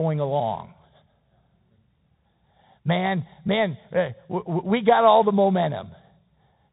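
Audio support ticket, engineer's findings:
Bluetooth CVSD headset codec, whole clip. Speech band-limited, nothing above 3.8 kHz. Granular hiss under the speech, scratchy s sounds, distortion on loud high-frequency content where the adaptive one-bit step can't keep up. Sound fits a 64 kbit/s CVSD link. Unlike a plain low-pass, the grain and slope overload give it away; unlike wideband mSBC, the cutoff sits well below 7 kHz.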